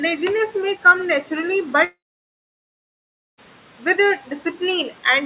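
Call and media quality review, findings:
Long network dropout, 1.84 to 3.40 s: audio stops for about 1.5 s, brief fading buzz then near-silence; likely packet loss, receiver concealment extending last sound. Spectrogram: smeared energy decaying to blank band. Waveform: flat gap, resumes later without the lost part. Band-limited to 4 kHz, consistent with G.711 call path.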